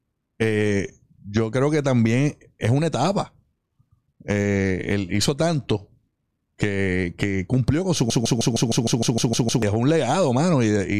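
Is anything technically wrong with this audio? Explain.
Yes. From 8.10 to 9.62 s, just after "que cumplió con su", a broken-record loop occurs: a 154 ms fragment repeats back to back ten times. A stalled player or stream likely kept resending its last buffered piece, so the speech meant for that span is lost.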